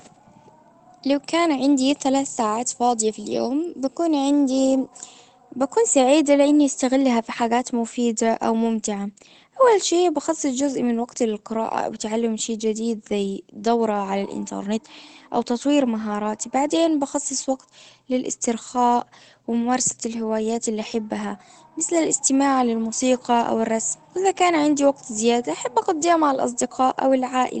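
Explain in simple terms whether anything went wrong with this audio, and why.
Nothing went wrong here: the speech just came through an ordinary internet call connection, which trims off the very highest frequencies the way calls normally do, and nothing else stands out as a problem.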